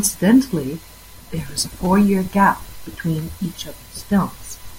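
Speech with a repeated buffer at 1.85 s, between "there is a" and "gap between each of". A 5.33 ms piece plays three extra times, giving a brief buzz consistent with a 256-sample buffer.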